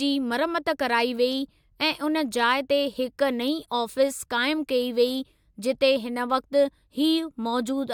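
No technical faults can be heard anywhere in this recording.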